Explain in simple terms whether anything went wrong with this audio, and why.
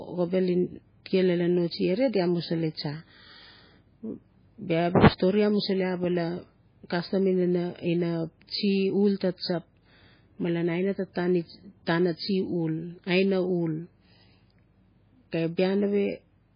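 Something went wrong for the whole clip: the speech was most likely squeezed through heavy MP3 compression, which had very little data to work with. To save space, the encoder threw away everything above about 5 kHz and dropped quieter details that it judged unimportant. As a result, the voice sounds dull and muffled from start to finish, with a watery, swirling quality, and s sounds come out thin and chirpy instead of crisp.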